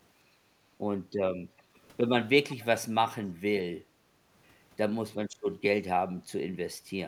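It's a speech clip with a DC offset running the whole way through, so the waveform sits off zero, wasting headroom and leaving steady energy at the very bottom of the spectrum. The room background gets gated by the echo canceller twice, at 0.64 to 0.76 s (a dip of about 10 dB) and at 3.84 to 4.22 s (about 11 dB, lasting about 0.4 s), as the canceller clamps the mic while the far end plays. A delayed copy of the speech, 375 ms behind, turns up very faintly at 1.57 to 1.62 s and more audibly at 2.51 to 2.66 s, likely echo leak from loudspeaker pickup the canceller didn't fully remove.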